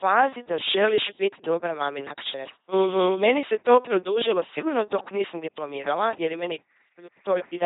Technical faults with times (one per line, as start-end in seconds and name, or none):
0.00-7.65 LPC-10 vocoder